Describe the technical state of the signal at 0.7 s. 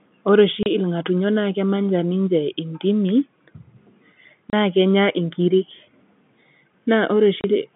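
Packet loss filled with silence, 0.63 to 0.66 s: a 30 ms gap, likely one lost packet, replaced by silence, leaving a hard-edged hole.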